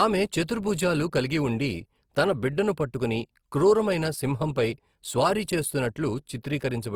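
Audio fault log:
Throughout: Opus compression. The speech carries a plainly audible rough, grainy, noisy texture, yet its bandwidth stays full, with content reaching about 20.4 kHz. This is likely Opus in its music (CELT) mode at a low rate, consistent with around 24 kbps. Bands short of bits are refilled with folded or noise content rather than left empty. So instead of the swirling, watery holes of MP3, the damage is steady graininess with no muffling.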